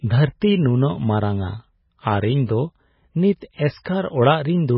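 A speech recording that sounds dull and watery throughout, with no treble at all above about 5.6 kHz and a swirling, metallic quality that comes and goes. That is the signature of heavy MP3 compression, likely at a very low bitrate of around 16 kbps. With so few bits available, the encoder cuts off the top of the spectrum and drops quieter frequency lines, which flicker on and off from one frame to the next. At 3.83 to 3.86 s, a brief wash of hiss runs ahead of a sharp attack for about 22 ms, and the onset lands soft rather than crisp. This is pre-echo. The codec spreads its quantisation noise across the whole transform block, so noise sized for the loud attack leaks into the quiet moment just before it.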